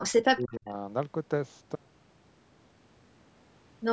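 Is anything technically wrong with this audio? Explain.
Yes, there are two faults. From the start to 0.72 s, the speech is suppressed in double talk, likely because the echo canceller couldn't tell this talker from the far side's loudspeaker echo and turned both down. The speech sinks by roughly 30 dB before recovering.

From 1.76 s to the end, there is an audio dropout to a faint residue. The wanted signal was likely lost while the path stayed live, so the sound cuts off abruptly rather than fading, leaving only a faint trace about 35 dB below normal level.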